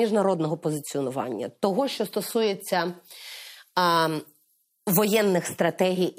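From 2.88 to 5.34 s the speech turns thin, bright and hissy, with sibilants jumping forward: pre-emphasis left on. The treble lift applied for FM transmission, a 50 µs curve, was never undone by the matching de-emphasis, leaving 10 kHz about 10 dB hotter than 1 kHz. Unlike a fixed treble shelf, the boost climbs steadily from roughly 3 kHz upward, so the very top sounds harshest while body and low end stay intact.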